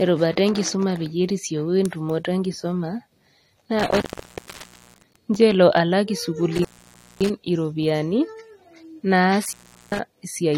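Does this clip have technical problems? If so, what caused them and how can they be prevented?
Yes. The speech has nothing above 16.6 kHz, and the band below carries the smeared, swirly coding artefacts of a heavily compressed file. This is likely low-bitrate audio saved at a high bitrate: the cut-off and artefacts fit an earlier AAC encode at around 48 kbit/s, later re-encoded as 320 kbit/s MP3, which cannot restore what was discarded. To prevent it, always export from the original uncompressed recording rather than from a compressed copy.

The sound also drops out three times, with crackle at each edge and only faint hiss in the gaps: from 3.79 to 5.16 s (open for about 0.93 s, ending just before "ncho elo alak"), from 6.55 to 7.30 s (about 0.56 s, starting right after "ncho elo alak"), and from 9.45 to 10.00 s (about 0.39 s). This is an intermittent contact, a loose cable or plug briefly breaking the signal path. 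To prevent it, check and reseat connectors before recording and replace any worn cable.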